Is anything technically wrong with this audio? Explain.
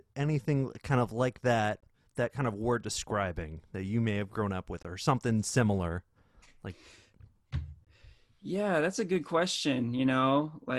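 Yes. There is a gap between chunks: the speech arrived in 3.0 s pieces, leaving 21 ms of silence at 1.80 to 1.83, 4.83 to 4.85 and 7.85 to 7.87 s, just after "kind of like that" and "have grown up with". Each hole is evenly spaced.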